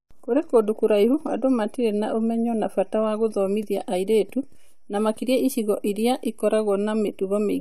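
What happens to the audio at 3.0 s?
Nothing goes wrong at 3.0 s; the speech runs through that moment intact, with no dropout, click, distortion or other fault to be heard.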